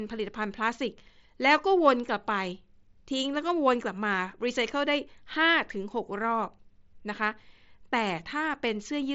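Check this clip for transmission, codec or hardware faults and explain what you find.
Nothing faulty turns up in the signal: the speech arrives over a Bluetooth mSBC headset link working as designed, its wideband limit audible as an absence of content above about 7.7 kHz, with just the light graininess that codec leaves behind.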